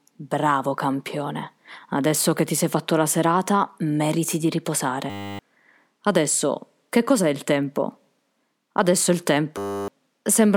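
A system hang loop hits the speech at 5.10 to 5.39 s and again at 9.58 to 9.88 s. Each time the playback stalled while the hardware kept replaying one 10 ms buffer, so a steady 100 Hz buzz replaces around a third of a second of audio.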